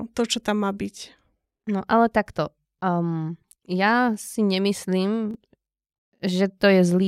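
At 2.78 s, just after "ale takto", and again at 5.31 s, the speech jumbles for about 40 ms. These are chunks out of order: one 10 ms chunk arrived late and plays three chunks after its proper place, leaving three hard joins. Unlike a dropout, no sound goes missing and no gap or silence appears. The sound is all there, briefly scrambled.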